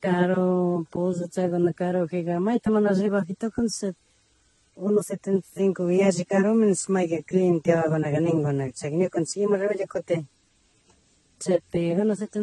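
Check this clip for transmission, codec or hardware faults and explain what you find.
There's one codec problem, running the whole way through this speech: the sound has a stacked, layered smeariness with nothing above 11.8 kHz. That's likely transcoding between lossy codecs, and the mix of artefacts fits something like AAC, then MP3, then Vorbis at low bitrates. Each pass re-encodes the previous one's damage and adds its own, so you get their different artefacts together, all capped at the lowest cut-off in the chain.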